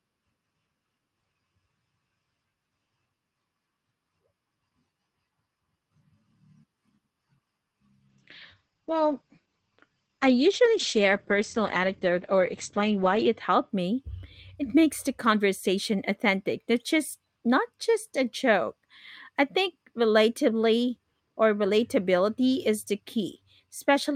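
From 8.09 s to 13.75 s the speech passes through a call bitrate drop. The Opus stream turns coarse and watery for about 5.2 s, and the top end narrows from 12 kHz to 8 kHz, which fits the encoder being pushed from roughly 40 kbps down to around 11 kbps. Unlike packet loss, there are no gaps or clicks. The sound stays continuous but degraded, then regains its fuller, brighter quality once the rate recovers.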